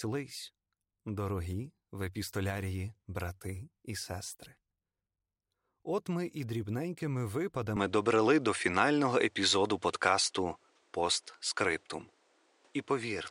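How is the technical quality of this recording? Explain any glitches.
The recording has one clear glitch: a change in tone partway through the speech that lasts to the end.

From 7.77 s onward the sound turns duller and boxy with no gap at the change, most likely because the input switched to a poorer device. The new path passes nothing above 10.5 kHz, brings a faint new noise floor around 40 dB below the speech, and shifts the level by around 5 dB. On a spectrogram the upper band goes abruptly empty at that point, and the waveform's envelope steps in size.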